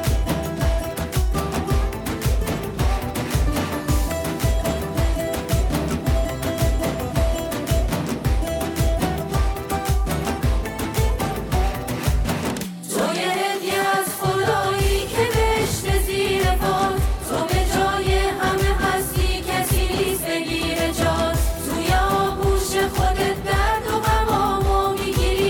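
A block of digital silence at 4.80 s: a 0.73 ms run of zeros, which fits a 32-sample block, cuts in abruptly and is heard as a single tick.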